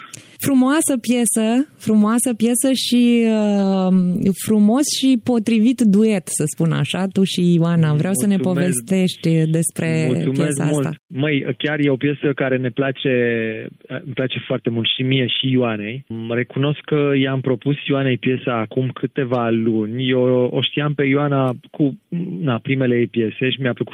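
No technical faults are audible.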